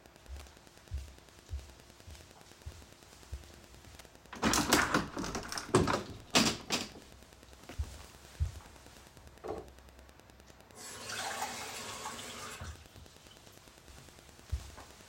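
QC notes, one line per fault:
Throughout: Wi-Fi interference, steady ticking about ten times a second, well below the sound, from rectified 102.4 ms beacons; spectrogram shows evenly spaced thin vertical broadband lines.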